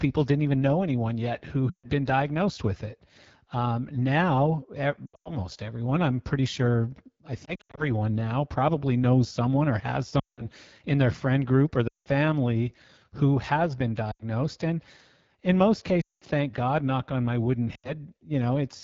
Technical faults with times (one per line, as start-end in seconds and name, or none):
0.00-18.84 AMR wideband (HD Voice) codec
1.69-1.87 lost AMR speech frames
5.06-5.37 lost AMR speech frames
7.45-7.85 lost AMR speech frames
10.19-10.47 lost AMR speech frames
11.87-12.08 lost AMR speech frames
14.12-14.22 lost AMR speech frames
16.02-16.24 lost AMR speech frames
17.75-17.91 lost AMR speech frames